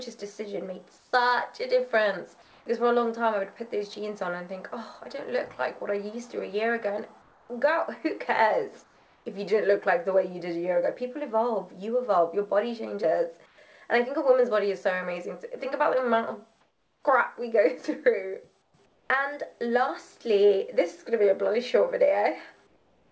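The quiet gaps at 0.98–1.13, 2.42–2.66, 7.22–7.49, 8.84–9.26, 13.46–13.58, 16.61–17.03, 18.62–19.10 and 22.67 s to the end have comfort noise in place of the background: flat, featureless hiss, mostly about 3 to 6 dB quieter. That's likely discontinuous transmission, with the receiver synthesising noise, heard through a call path that stops near 8 kHz, which fits G.722.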